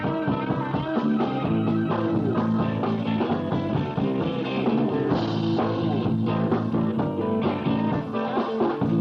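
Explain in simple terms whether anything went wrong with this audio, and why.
Nothing went wrong with this recording: it runs without any break, distortion, dropout or other technical problem at any point.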